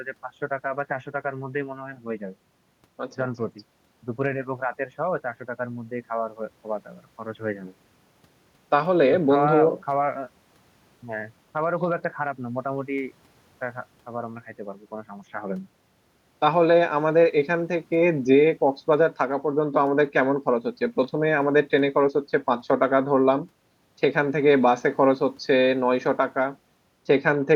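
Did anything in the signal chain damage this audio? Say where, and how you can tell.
No, no damage is audible.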